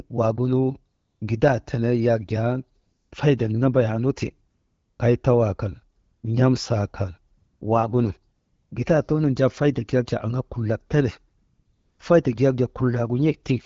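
The real background drops out and a smooth, steady hiss switches in during pauses at 0.95–1.21 s, 2.81–3.11 s, 4.51–4.99 s, 5.99–6.23 s, 7.37–7.61 s, 8.37–8.71 s and 11.37–11.99 s. This is AMR comfort noise. The phone judged each gap silent and stopped sending speech frames for 240 to 620 ms, so the receiver filled the gap with synthetic noise built from a rough sketch of the background's level and spectrum. The wideband speech around these gaps is clear.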